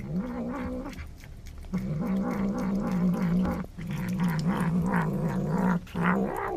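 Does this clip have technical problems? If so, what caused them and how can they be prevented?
Yes. A sudden voltage step, likely from a plug being seated, a switch or a static discharge, entered the signal chain, and the circuits after it shaped it into a brief pulse. This produces a loud pop. There is a double pop from 3.45 to 3.67 s, peaking around 10 dB above the audio, and a single pop from 5.02 to 5.04 s, about 5 dB above it. The sound carries on underneath both. Securing connections beforehand, not switching equipment while recording, and grounding against static would prevent this.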